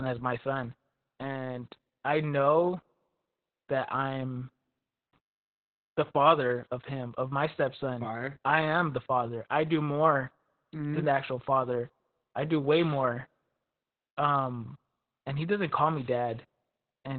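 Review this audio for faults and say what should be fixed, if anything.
Opus voice compression runs throughout. Nothing is present above 4.4 kHz, and the speech sounds muffled, hoarse and slightly robotic, which fits narrowband SILK at about 8 kbps. Encode at a higher bitrate so Opus keeps the full band.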